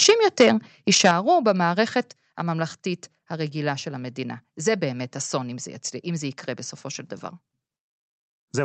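Harsh, crackling edges hit the loudest moments at 0.03 to 0.11 s and again at 0.40 to 0.48 s. The tops of the waveform are flattened about 6 dB past the converter's limit, with around a tenth of the samples squared off. This is microphone overload, likely from the input volume being set so high that the converter ran out of headroom. A longer burst at 0.93 to 1.11 s overshoots by about 7 dB but clips only a few percent of samples. A brief tick at 1.48 to 1.50 s barely exceeds the limit, by about 1 dB.

Sudden drops in level, affecting the voice and the background together, follow the distortion at 0.10 s (about 2 dB) and 1.11 s (about 6 dB), and come once more at 2.13 s (about 4 dB). The first two land right as a clipped peak ends. That is the microphone volume stepped down, likely by the call software reacting to the overload and cutting the device's input gain in single jumps rather than a smooth fade.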